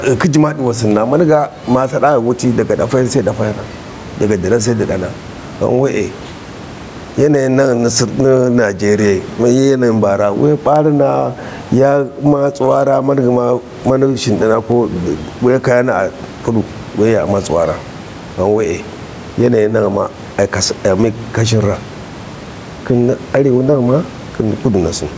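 Gain pumping runs through the whole recording, with the gain swinging by around 15 dB. The likely cause is input gain set far too high, with a fast limiter clamping every loud syllable. The speech sounds squashed and flat in level. The room noise sits about 29 dB below the speech.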